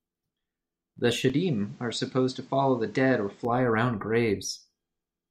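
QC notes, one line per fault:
1.30–3.45 s, input switched to a poorer device: the speech suddenly loses everything above 8.4 kHz and gains a faint new noise floor far below it, then clears again, with no gap and no level jump. The fresh background hiss points to a likely microphone change rather than mere filtering.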